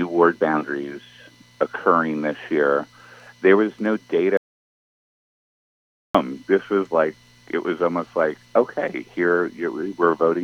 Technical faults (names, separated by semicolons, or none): audio dropout to silence